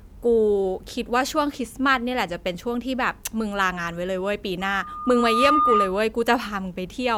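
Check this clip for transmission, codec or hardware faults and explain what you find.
One fault is present, a hardware-path problem in this speech clip. From 4.60 to 5.96 s, loudspeaker feedback squeal: the mic re-amplifies its own loudspeaker until a 1.2 kHz tone swells over roughly a second, ending a few dB above the speech. On a spectrogram it appears as a bright horizontal line, and the waveform envelope visibly grows.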